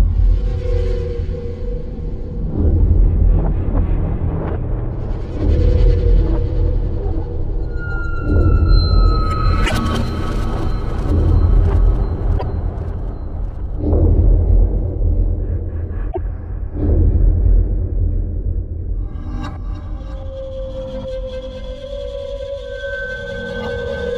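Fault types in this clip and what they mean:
Damaged data in a compressed stream: corrupted bytes make the decoder misread frames and lose sync until it finds the next valid frame header. Here it shows as three short blips of roughly 0.1 s each, at 9.63, 12.34 and 16.08 s.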